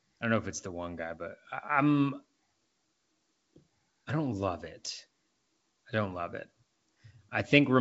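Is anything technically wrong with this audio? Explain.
No, no faults found.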